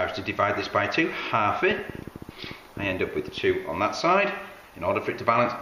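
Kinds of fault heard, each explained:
Train of clicks: From 1.71 to 3.51 s, a rapid patter of about twenty near-identical ticks rides over the sound at roughly 11.7 clicks per second. The spacing is uneven, and the pulses peak about 5 dB above the surrounding audio, so they stand out clearly, pauses included. Repeated impulses of the same shape like these likely come from electrical interference from nearby equipment or a faulty connection or power supply briefly injecting spikes into the signal.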